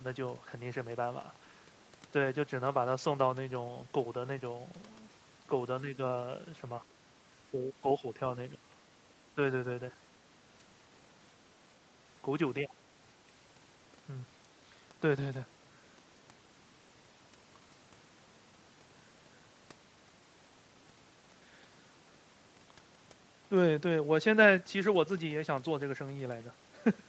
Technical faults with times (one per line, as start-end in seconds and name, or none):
7.49-8.18 speech suppressed in double talk
8.51-8.62 speech suppressed in double talk
12.66-12.70 speech suppressed in double talk